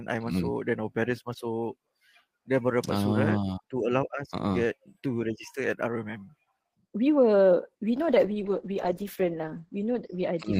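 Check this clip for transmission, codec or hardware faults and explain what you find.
One fault is present. From 7.86 s to the end, a call bitrate drop occurs. The encoder gets fewer bits, consistent with about 32 falling to 11 kbps, and the bandwidth narrows from 20 kHz to 8 kHz. The audio turns coarse and muffled.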